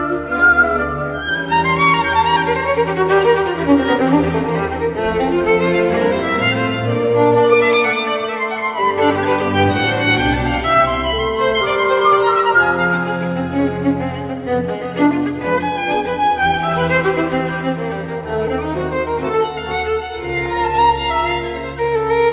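No technical faults can be heard; the audio comes over a call path whose bandwidth ends at 4 kHz, which fits a G.711 mu-law codec at 64 kbps, and that path is working as it should.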